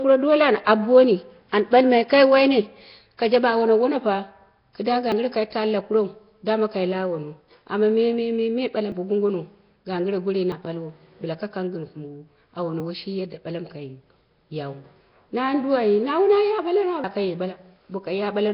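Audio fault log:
Throughout: Nellymoser compression. The speech carries a rough, hissy halo and a smeared, underwater blur, which likely comes from the Nellymoser Asao codec at a low rate, around 22 kbps. With only two bits a sample spread across each block, weak bands get no bits and are filled with noise. On a spectrogram grainy noise fills the gaps between harmonics.
5.12, 8.92 (just after "amma mememe balam"), 10.52, 12.8 and 17.04 s: dropped buffer (overrun). At each point the sound jumps ahead with no silence in between. The likely cause is the program failing to read its samples before the hardware overwrote them, so the two sides of the gap are joined directly. The first four gaps lose a few tens of milliseconds each, and the gap at 17.04 s loses about a tenth of a second. The waveform shows an abrupt discontinuity at each join, and the spectrogram shows a thin vertical broadband line there.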